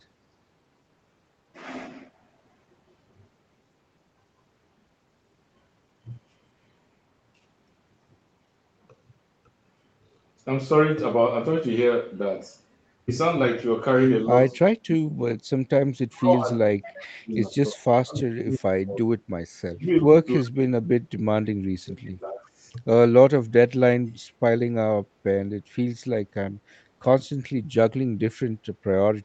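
An echo canceller likely mistook simultaneous talk from both ends for its own loudspeaker echo and clamped down on the near talker, producing speech suppressed in double talk. It happens three times: 14.72 to 15.27 s, 16.02 to 19.21 s, and 19.65 to 22.63 s. In each stretch the speech sinks by as much as about 40 dB, with around half a second affected in the first episode and roughly two seconds in each of the later two.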